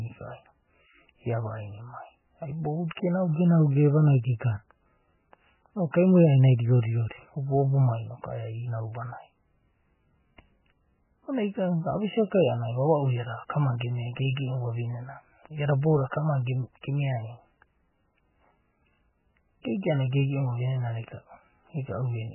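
Throughout the speech, everything above about 3 kHz is missing, leaving it dull and boxy, and the remaining sound swirls and warbles with smeared attacks. That points to heavy MP3 compression, likely at a very low bitrate around 8 kbps, where the encoder cuts the treble and drops weak frequency lines frame by frame.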